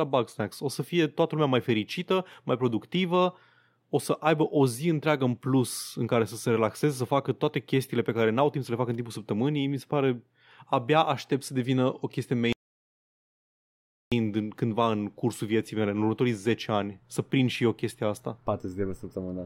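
At 12.53 s the speech cuts off mid-flow in an audio dropout to silence, returning at 14.12 s, about 1.6 s later. No room tone remains: the waveform is a flat line, the spectrogram a blank band. The input was likely lost while recording continued.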